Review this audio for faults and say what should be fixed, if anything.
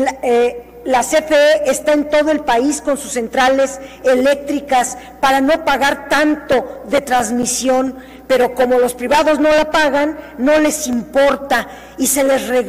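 CD scratch ticks occur at 6.52–8.1 s and 10.93–12.06 s, roughly five per second. Each disc turn, a blemish outruns error correction, leaving millisecond-long patched gaps. Clean or replace the disc and re-rip with a secure ripper that re-reads damaged sectors.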